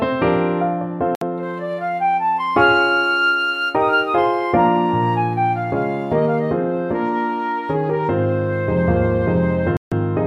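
At 1.15 s the sound drops out and returns at 1.23 s, leaving a gap of about 63 ms. At 9.77 s it drops again, returning at 9.93 s after about 148 ms of silence. Each gap is a clean cut to nothing, then playback resumes. The likely cause is a Bluetooth stall. Radio interference delays packets. The headphones' buffer empties. Sound stops until resent packets arrive.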